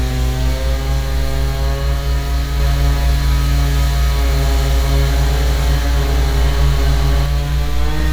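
From 2.60 to 7.26 s, a doubled audio track: a dry, equally loud copy trails roughly 0.7 s behind, likely from a second, slower capture path.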